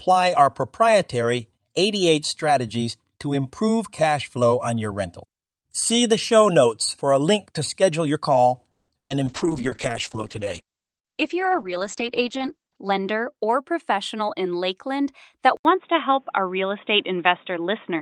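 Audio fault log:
8.71–8.90 s, call audio freeze: Just after "to schedule your call", packets were likely held up and the jitter buffer ran dry. The receiver stretched the last sound for about 170 ms, ending in roughly 40 ms of silence. Nothing is lost, but the speech resumes about 170 ms late.
9.00–9.12 s, burst of packet loss: Also shortly after "to schedule your call", about 100 ms of packets were lost or arrived too late to play. The gap is filled with about 100 ms of silence. Speech then picks up further on, with that 100 ms of audio missing.
9.28–13.39 s, call bitrate drop: The bandwidth estimate collapsed and the encoder fell from 48 kbps to 9 kbps, staying at the lowest rate for about 3.6 s. Coding turns coarse and the audio band shrinks from 20 kHz to 8 kHz, so the speech sounds muffled and rough.
12.67–14.42 s, jitter buffer speed-up: Excess buffered audio was trimmed by removing short pitch-period pieces, about 150 ms in all. 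Playback runs at roughly 109% speed while the pitch stays the same, so this stretch of speech sounds hurried.
15.57–18.02 s, input switched to a poorer device: The input changed mid-recording, to what is likely a narrower-band microphone or headset profile. An 80 ms silence marks the switch. After it, nothing above 3.8 kHz remains, the level shifts by a few dB, and new background noise sits around 45 dB below the speech, giving a dull, boxy tone.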